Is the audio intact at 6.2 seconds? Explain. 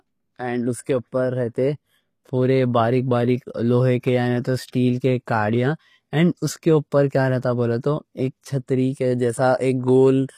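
No. At 6.2 seconds, as everywhere in this speech clip, the sound carries what is likely HE-AAC compression. The codec keeps only the lower spectrum and fills the treble by copying lower bands upward under a coarse envelope, so sibilants come out gritty and metallic, and the plainly audible damage fits a low bitrate near 24 kbps. On a spectrogram, the upper band looks smeared and repeated, with harmonics misaligned at the crossover and nothing above 15 kHz.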